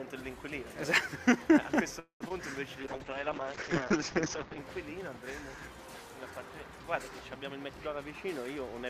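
At 1.99 s the audio stalls in a call audio freeze lasting until 2.22 s. The last sound is drawn out and fades, and about 110 ms of it is plain silence. When the audio resumes, it picks up where it stopped. Nothing seems lost, but a 210 ms gap now sits in the timeline. The likely cause is packets held up in transit until the jitter buffer ran dry.

Just after, from 2.28 to 2.32 s, comes a short concealed packet loss. About 20 ms of audio never reached the decoder in time. The receiver patched the hole by stretching the preceding sound, then blended back into the real signal. The result is a quick smear or wobble rather than a clean dropout, and a brief sound there could go missing.

From 2.82 to 4.64 s a call bitrate drop takes hold. The encoder was pushed down to very few bits, which fits a fall from about 96 kbps to about 8 kbps. The top end closes in from 20 kHz to 8 kHz, so the sound turns muffled. 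Coarse coding adds a rough, watery texture. The worst stretch lasts about 1.76 s before quality climbs back.

From 7.50 to 8.05 s a jitter buffer speed-up occurs. Too much audio had built up in the buffer, so the receiver trimmed it back. It cut short pitch-length slices again and again, about 70 ms in total. Playback runs at 111% speed with the pitch unchanged. This passage sounds hurried, and any steady rhythm in it would tighten noticeably.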